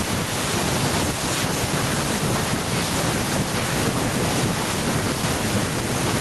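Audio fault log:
No faults detected anywhere in this speech recording.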